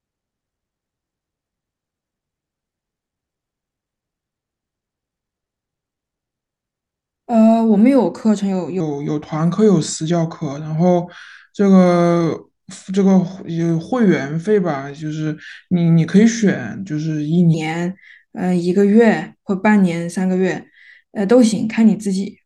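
A section at the wrong speed runs from 8.80 to 17.54 s, where the speech slows to about 0.866 times its proper rate and drops roughly three semitones, deeper and more drawn out. The likely cause is that stretch being played against the wrong clock.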